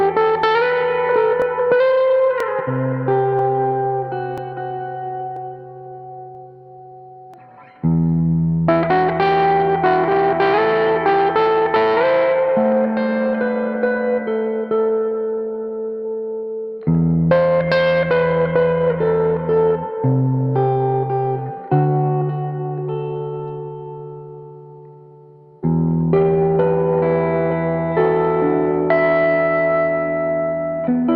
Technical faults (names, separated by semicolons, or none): overlap between stream segments